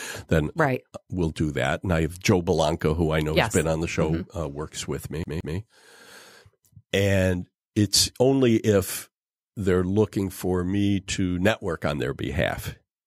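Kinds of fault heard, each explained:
CD stuck on one turn: a scratch sends the laser back a track each revolution, so a 0.17 s slice of the speech plays twice between 5.24 and 5.57 s, with a brief mute at each jump. A waveform shows two identical blocks separated by hairline gaps; a spectrogram shows repeated patterns with thin vertical breaks.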